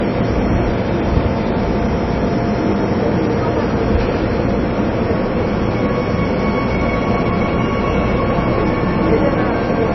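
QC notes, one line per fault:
Throughout, MP3 compression: nothing is present above 5.8 kHz, and the audio has a plainly audible watery swirl with smeared attacks. This is likely a low-bitrate MP3 encode, consistent with about 24 kbps, where the encoder cuts the treble and drops weak spectral components frame by frame.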